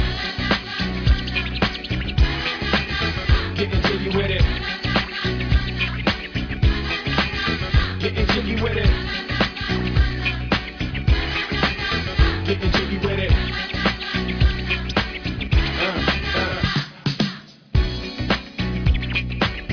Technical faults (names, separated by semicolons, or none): none